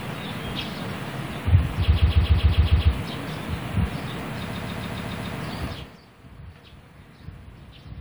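From 1.92 to 2.89 s and again from 4.52 to 5.35 s, repeated frames make the sound stutter. A block of about 139 ms replays seven and then six extra times, adding 0.98 s and 0.84 s. On a waveform or spectrogram, the identical slices appear side by side.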